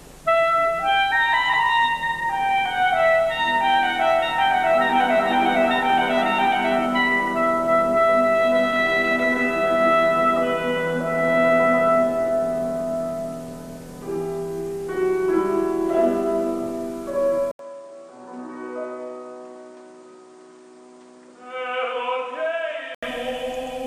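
The recording input was likely switched to a poorer device at 17.51 s, and the audio stays on it until 23.03 s. An 80 ms silence marks the switch, and then the sound turns duller and narrower, with nothing above 9.5 kHz. The level drops by roughly 10 dB, and a new background noise appears, sitting well under the signal. At 23.03 s the fuller, brighter sound returns.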